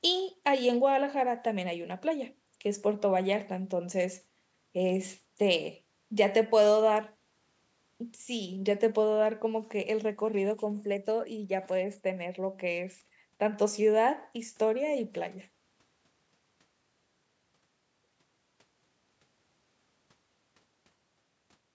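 Nothing stood out on listening to this speech, which carries the ordinary character of a call microphone path, with the lowest bass trimmed and nothing above 8 kHz.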